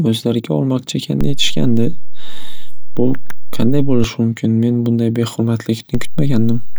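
At 1.21 s, after "o'zlariga olmoqchi", a DC step shifts the waveform's zero line by about -9 dBFS. It holds until 4.04 s, then drops back before "mumkin men bunday". Each edge gives a low thump. Another step of about -11 dBFS at 5.95 s holds to the end.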